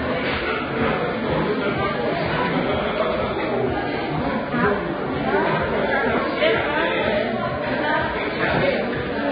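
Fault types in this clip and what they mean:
Vorbis compression: Hiss and graininess run throughout. Tones sound rough and attacks are blurred. Nothing is heard above 4.9 kHz. The cause is likely heavy Vorbis coding. Treble detail was quantised so coarsely it became noise, which fits a bitrate near 17 kbps.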